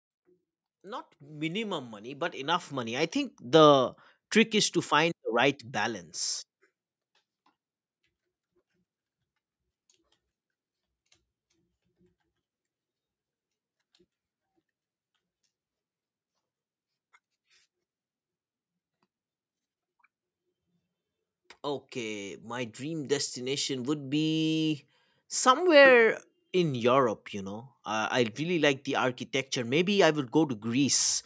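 From 0.69 s to 3.74 s the level climbs steadily by about 11 dB, and it lands just before "trick is to find". That's automatic gain rising. The gain control decided the input was too quiet and turned itself up over those three seconds, so the speech and the room noise swell together instead of the speech alone getting louder. The call's microphone processing is there too, with nothing above 8 kHz.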